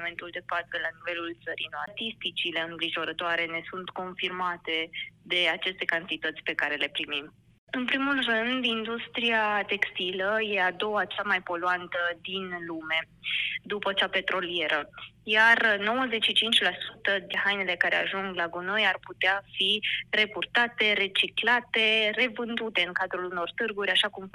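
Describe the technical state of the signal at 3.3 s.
At 3.3 s the signal is intact, with no audible dropout, distortion, glitch or other technical fault at that moment.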